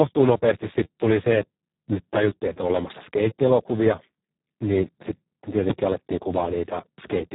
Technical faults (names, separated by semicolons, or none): Speex codec; invalid numbers at full scale